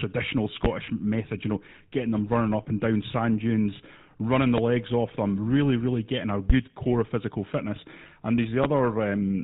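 Right from the start the whole speech track carries the GSM full-rate codec sound. It's plainly audible: that buzzy, gravelly roughness you get when the codec rebuilds the voice from a vocal-tract model driven by a sparse pulse train that keeps only every third excitation sample. Nothing comes through above 4 kHz, so it's dull as well as grainy, which fits the old 13 kbps full-rate coder.

The first loud pop lands at 0.65 to 0.68 s, just before "method you know getting". It's a single sharp hit, roughly 20 dB above the speech, with the talk carrying on underneath. The cause is likely a voltage spike from a plug, switch or static discharge that got shaped by the downstream circuitry. The same kind of single pop, about as loud, comes again at 6.50 to 6.53 s, between "really really getting a" and "core of physical fitness".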